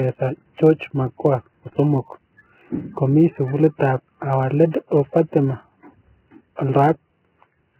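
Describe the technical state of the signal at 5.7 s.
At 5.7 s the signal carries both faults, as it does across the whole clip. The audio has likely been through heavy Vorbis compression at a very low bitrate, around 10 kbps. At that rate the encoder drops the upper band entirely and coarsely quantises what remains above its smooth spectral floor, swapping fine detail for noise of similar energy. The speech lacks its upper frequencies, sounding muffled, hissy and grainy, with roughened tone and smeared consonant onsets.

A block size mismatch (truncated) is also present. One stage writes blocks slightly longer than the next stage reads, and the tail of every block is discarded. Each cut leaves a small discontinuity, and these repeat at 91.9 Hz as a steady low buzz riding under the speech. The two block sizes are so close that the speed-up is negligible: the audio runs at its normal rate and pitch.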